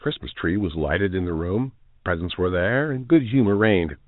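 The speech shows no technical faults, keeping only the narrow band of ordinary G.711 telephone coding, with nothing above 4 kHz and the faint level-following grain that format always carries.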